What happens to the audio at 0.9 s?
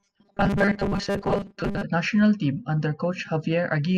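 At 0.9 s the speech is robotic sound from repeated short buffers (0.01–1.83 s): a rigid 200 Hz metallic buzz, likely from a 5 ms segment replayed through most of the span. The spectrogram shows evenly spaced 200 Hz harmonic lines, and the waveform shows a repeating 5 ms pattern.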